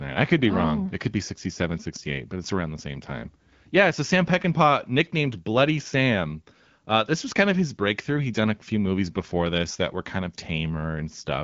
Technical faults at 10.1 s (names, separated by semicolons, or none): none